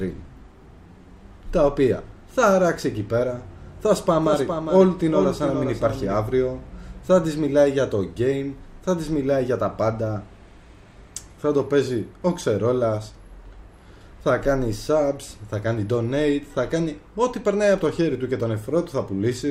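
From 4.05 to 6.21 s, a doubled audio track appears. A second full-band copy trails the original by roughly 400 ms, about 5 dB quieter. It has no decay or room colour. It starts and stops abruptly. A slower second capture path is the likely cause.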